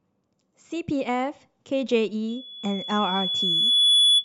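From 2.28 s to the end of the clip at 4.25 s, a single piercing tone at 3.4 kHz rises out of the speech, swelling over about a second and a half until it sits around 10 dB above it. This is loudspeaker feedback squeal: the microphone is hearing the loudspeaker it drives, and at 3.4 kHz the round trip through that loop adds gain rather than losing it, so the tone keeps feeding itself and growing.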